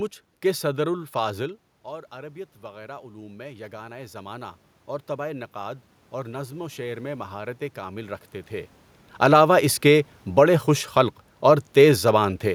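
Just after "کہ صدر الافاضل", around 1.5 s, the talker moves back and the voice drops. From 1.84 to 4.56 s the automatic gain control responds by rising. It lifts the level by about 7 dB over nearly three seconds. Voice and room noise swell together. A second automatic gain rise runs from 5.07 to 8.79 s, adding about 5 dB. The input had fallen by about 14 dB, so neither rise fully restores the level.

Around 8.5 s the talker moves again. From 9.08 to 12.4 s the automatic gain control falls. It pulls the level down by about 5 dB. The voice sinks steadily. The room noise sinks with it, which shows this is gain and not the talker.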